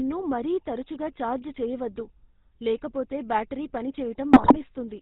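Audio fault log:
throughout GSM full-rate codec: The speech has passed through the original GSM coder, which models the vocal tract with a filter and excites it with a regular pulse train, keeping only every third excitation sample. That coarse excitation gives the voice a buzzy, gravelly roughness that is plainly audible across the whole clip, and nothing above 4 kHz survives, so it sounds narrow and dull. The character fits the 13 kbps full-rate coder.
4.32–4.57 s GSM bit errors: Just after "లేకపోతే బ్యాటరీ పని", corrupted bits reach the speech decoder, at a rate that points to a few percent of bits flipped. When filter, pitch or gain values arrive wrong, each affected frame gets a warped spectrum or a sudden jump in level, so the voice breaks into squawks, pops and gargling for about a quarter of a second. That duration fits roughly a dozen consecutive 20 ms frames being hit.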